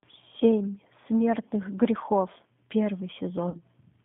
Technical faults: G.729 codec; VoIP packet loss concealed by the speech codec

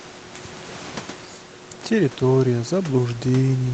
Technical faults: none

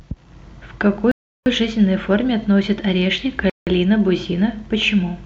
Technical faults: Bluetooth stall

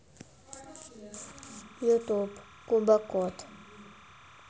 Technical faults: timecode bleed

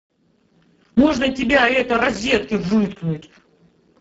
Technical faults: Speex codec

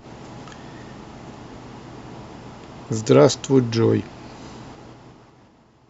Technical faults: zipper noise

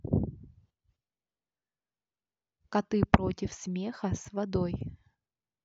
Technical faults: clock drift buffer slips

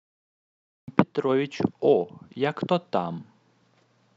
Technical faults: cut-off start

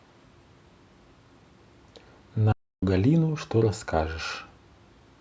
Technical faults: playback stall

